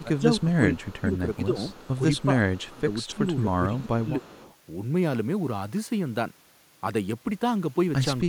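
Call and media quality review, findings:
Speech suppressed in double talk at 0.02–1.58 s, 2.26–3.27 s, 3.61–4.27 s and 8.22–8.29 s. Level dips of about 20 dB (about 30 dB at the last one). Roughly a second of the first span is hit, about half a second of the second, less in the third. Likely cause: echo canceller's double-talk handling, which attenuates near-end speech along with the echo it can't separate. Waveform shows notched, gated envelope segments. Spectrogram shows energy collapsing across bands.

Echo leak at 0.37–0.99 s, 1.70–2.24 s, 2.56–3.16 s and 4.24–4.55 s. A faint copy of the speech trails 270 ms behind, about 25 dB down. Likely cause: incomplete cancellation on the loudspeaker side, so the residual gets returned. Spectrogram shows a weak duplicate of the harmonic pattern shifted right by 270 ms. Waveform shows a low-level tail after the syllables.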